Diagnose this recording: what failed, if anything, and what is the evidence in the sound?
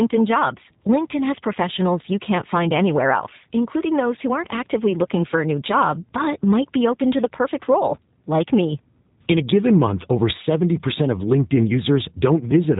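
Codec stage: the speech went through a G.729 codec for its whole length, consistent with an 8 kbit/s VoIP link. A spectrogram shows a flat ceiling at 3.8 kHz, and the sound is plainly rough and synthetic, rebuilt from a vocal-tract filter, pitch predictor and sparse pulses.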